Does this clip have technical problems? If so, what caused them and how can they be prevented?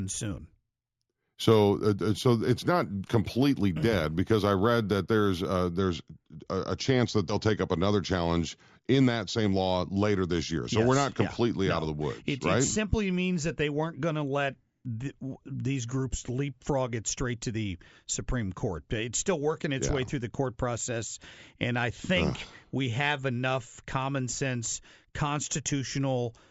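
Yes. Imaging from linear upsampling, 0.0 to 5.79 s: straight-line interpolation dulls the top and leaves mirrored speech images at 8 to 16 kHz, roughly 30 dB down, which fits upsampling from 16 kHz. To prevent it, resample with a proper steep low-pass (windowed-sinc or polyphase) filter.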